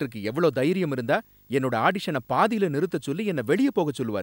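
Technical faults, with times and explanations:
Throughout, video or display buzz: a steady 50 Hz buzz with hash above it sits roughly 35 dB under the speech, plus a high tone at 15.6 kHz. A screen or video cable is coupling into the audio, the buzz following the picture's field rate and the tone its line rate.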